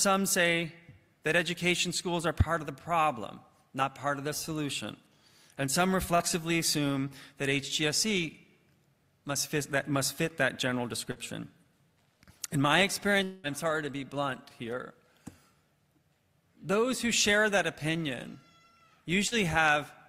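Short concealed packet loss occurs three times, at 6.15–6.22 s, 11.11–11.18 s and 19.27–19.34 s. Each time about 40 ms of the stream failed to reach the decoder in time. The receiver covered the gap by extending the preceding sound for roughly the same length and then crossfaded back into the real signal, so each spot comes across as a brief smear or wobble. Whatever fell inside those 40 ms is gone. A longer gap at 13.23–13.46 s is likely a long network dropout. About 200 ms of audio never arrived, and the whole hole was papered over by the receiver's continuation of the last sound, heard as a fading buzzy or hissy stretch rather than true silence. When the signal resumes, the missing fifth of a second is simply skipped.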